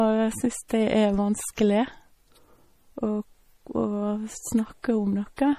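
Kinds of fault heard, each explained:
MP3 compression: The speech carries plainly audible codec damage throughout, with nothing above 15.1 kHz and a watery, swirling quality as weak frequency lines drop in and out between frames. This is likely MP3 encoding at a low bitrate, around 40 kbps.
Pre-echo: At 0.68 s a brief hiss of about 14 ms leads into a sharp attack. The codec spread quantisation noise across its whole transform block, so noise meant for the loud onset also fills the quiet moment just before it.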